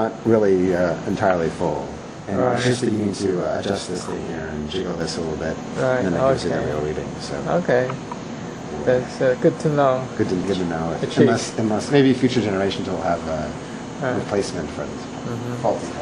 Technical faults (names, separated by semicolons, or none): channel delay (doubling)